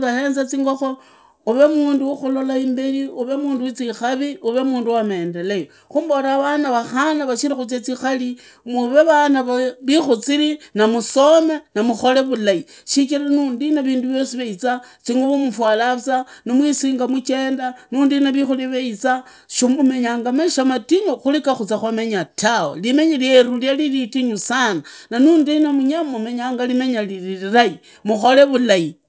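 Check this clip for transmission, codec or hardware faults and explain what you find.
One fault runs through the whole speech clip: the resampler restarted on every block.

Throughout, the conversion, which sounds like 24 kHz down to 16 kHz, treats each 20 ms block in isolation, leaving a small error at every block edge. This gives a 50 Hz buzz riding on the speech and vanishing in pauses. A spectrogram shows faint vertical lines every 20 ms; the waveform shows tiny steps at those boundaries.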